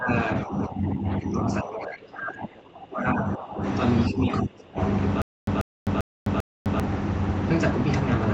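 From 0.0 to 0.1 s, 0.44 to 3.63 s and 4.09 to 4.78 s the speech sinks by up to about 25 dB. This is speech suppressed in double talk. The likely cause is an echo canceller that took the talker for loudspeaker echo while the far side was speaking.

Between 5.22 and 6.80 s the same 139 ms burst plays four times, once every 395 ms, with about 256 ms of digital silence after each. This is a stutter with silent gaps, likely from a stalled stream replaying its last buffer. The identical repeats and true silence set it apart from concealment, which fills gaps with smeared sound.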